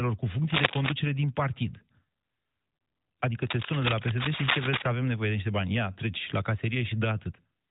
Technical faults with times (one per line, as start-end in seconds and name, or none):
0.50-0.93 cable scratch noise
3.42-4.82 cable scratch noise